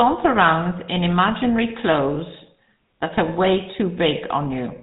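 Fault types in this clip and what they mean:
GSM full-rate codec: The speech sounds buzzy and gravelly throughout, with a plainly audible rough edge and nothing heard above 4 kHz. The vocal tract is modelled and driven by coarse, regularly spaced pulses, a harshness which fits 13 kbps full-rate coding.
lost GSM frames: Just after "around in imaginary", from 2.14 to 2.17 s, the sound briefly freezes into a rough, metallic ring. One bad 20 ms frame was concealed by repeating the last good frame's settings.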